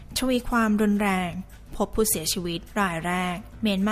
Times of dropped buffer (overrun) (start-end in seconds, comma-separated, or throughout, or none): none